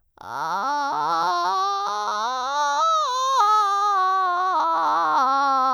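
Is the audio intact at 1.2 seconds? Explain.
Yes, the music plays through cleanly at 1.2 seconds with no dropout, click, distortion or other fault to be heard at that point.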